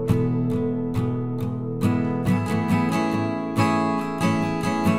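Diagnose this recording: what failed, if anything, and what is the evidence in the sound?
Nothing failed: the sound carries no evidence of any fault at any stage.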